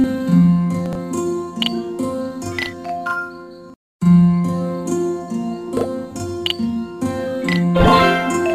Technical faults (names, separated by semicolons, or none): channel delay (doubling); chunks out of order